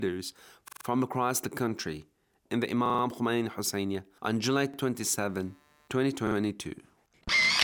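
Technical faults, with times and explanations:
0.68 to 0.85 s, 2.86 to 3.03 s, 4.74 to 4.78 s and 6.27 to 6.36 s: repeated buffer. A slice of about 43 ms, which fits a 2048-sample buffer, plays again four, four, one and two times, with a hard join at each repeat. That gives a rhythmic stutter rather than a gap, and no sound seems lost.
5.29 to 7.63 s: computer activity noise. A faint buzzing with pulses at around 150 Hz, roughly 40 dB below the sound, runs to the end. It comes from processor or graphics load disturbing the shared ground. Unlike steady mains hum, it follows the computer's activity, not the sound.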